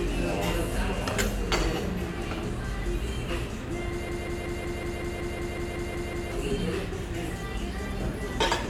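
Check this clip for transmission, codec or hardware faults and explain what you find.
There's one hardware-side fault, a system hang loop. From 4.09 to 6.32 s a 186 ms chunk repeats 12 times, a machine-gun stutter at 5.4 Hz. It fits a frozen driver replaying an 8192-sample ring buffer, losing about two seconds.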